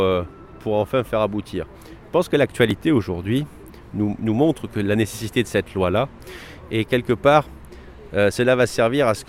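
At 2.71 s and again at 8.32 s the sound jumps, skipping roughly 10 ms and then about 20 ms. This is likely a dropped buffer (overrun), with samples overwritten before being read. Unlike a dropout, no silence fills the gap.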